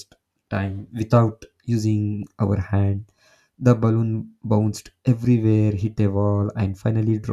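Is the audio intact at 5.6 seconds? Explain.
Yes, at 5.6 seconds the speech runs intact, with no dropout, click, distortion or other fault to be heard at that moment.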